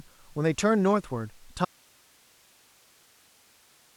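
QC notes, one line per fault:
1.65 s to end: audio dropout to a faint residue. The speech cuts off abruptly and never returns, leaving only a low hiss roughly 35 dB below the signal. The likely cause is the source dropping out while the path after it stayed live and passed its own noise.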